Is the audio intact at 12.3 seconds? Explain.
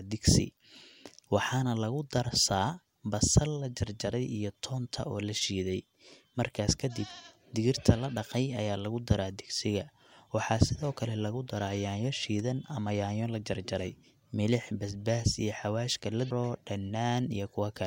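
Yes, at 12.3 seconds the audio is intact, with no dropout, click, distortion or other fault audible at that moment.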